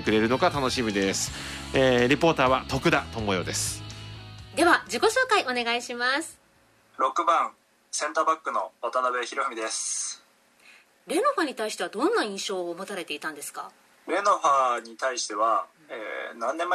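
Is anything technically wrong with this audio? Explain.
No, nothing technically wrong can be heard in this audio. Nothing in it stands out as a problem to flag.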